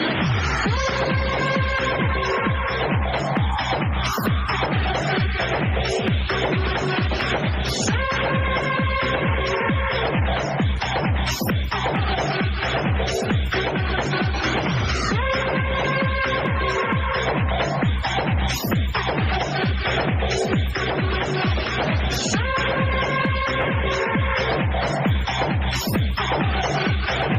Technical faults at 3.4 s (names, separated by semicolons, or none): gain pumping